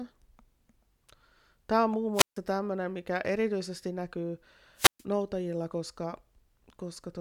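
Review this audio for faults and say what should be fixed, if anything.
Wireless microphone squelch dropout at 2.14 to 2.38 s, just after "on muun" and before "tämmöinen mikä erityisesti näkyy", and again at 4.76 to 5.03 s, after "tämmöinen mikä erityisesti näkyy". Each time the speech gives way to a short burst of hiss as the analogue FM signal weakens, and then the receiver's squelch cuts the output to near silence for about 148 ms and 128 ms respectively before the signal recovers. To prevent it, keep the transmitter in clear line of sight of the receiver, use fresh batteries and a clean channel, and position or diversify the antennas so the signal never falls below the squelch threshold.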